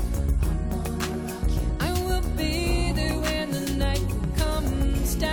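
At about 1.68 s there's a brief glitch from damaged data in a compressed stream, over in under 20 ms. A small patch of the encoded file got corrupted, so the decoder couldn't read those bytes properly, dropped out of sync and had to hunt for the next clean frame header before it could carry on. What you hear is a quick disruption in the audio, the kind of short artefact a decoder leaves when it stumbles over bad frames.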